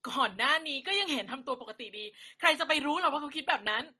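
Throughout the clip, the speech was likely transcoded between lossy codecs, which fits an MP3 stage near 48 kbit/s followed by Opus near 32 kbit/s. The second encoder spends bits on the first one's artefacts, so smeared, swirly textures stack together and nothing remains above 12.1 kHz.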